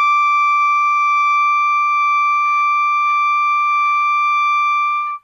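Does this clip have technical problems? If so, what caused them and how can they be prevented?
Yes. From 1.36 s to the end, the music turns duller as an adaptive stream switches to a lower bitrate, consistent with a drop to a low-rate HE-AAC rendition. On a spectrogram, energy above 14 kHz vanishes abruptly at 1.36 s, while the waveform shows no gap. A larger playback buffer or a higher minimum bitrate would prevent this.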